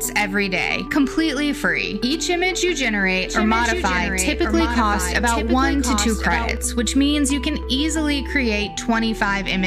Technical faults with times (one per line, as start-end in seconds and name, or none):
3.27-6.57 doubled audio track